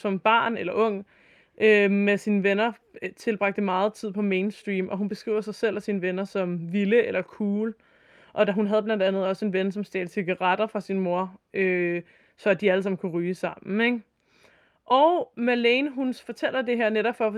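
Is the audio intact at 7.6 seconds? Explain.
Yes, the speech runs through 7.6 s intact, with no dropout, click, distortion or other fault at that moment.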